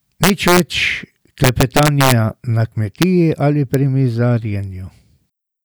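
Speech with integer overflow at 0.24–0.60 s and 1.44–2.12 s (about 2 dB over), and at 3.02 s before "ali pri" and 3.74 s. Peaks wrap to the opposite sign, giving violent cracks, large vertical jumps on the waveform, and broadband vertical streaks on a spectrogram.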